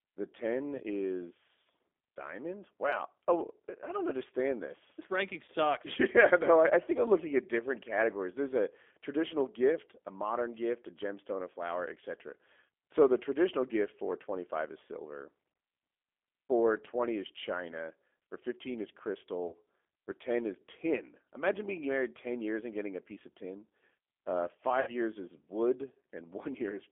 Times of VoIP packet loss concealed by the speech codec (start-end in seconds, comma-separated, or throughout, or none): 0.76-0.81, 5.45-5.50, 19.47-19.53, 24.81-24.92